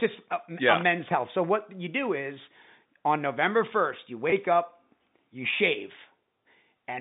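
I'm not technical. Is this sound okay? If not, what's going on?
No. At about 4.30 to 4.32 s, between "first you" and "up you", there is a brief packet loss with pitch repetition. About 20 ms of audio went missing in transit, which fits a single lost packet. To cover the hole, the receiver replayed the last tiny cycle of the voice, so you hear a slightly held, buzzy blip before normal speech resumes. Through all of this the sound has the narrow, telephone-like quality of ordinary landline coding.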